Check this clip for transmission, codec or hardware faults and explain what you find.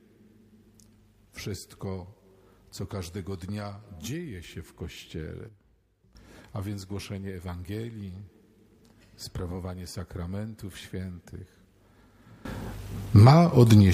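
Two sudden gain jumps are audible. From 5.48 to 6.15 s the level drops by about 11 dB, and from 12.45 s to the end it rises by about 19 dB. Each step lands from one sample to the next, with the background noise shifting along with the sound, and most likely comes from a gain setting applied without a ramp. On a waveform the envelope steps abruptly; a spectrogram shows every band brightening or dimming at once along a sharp vertical edge.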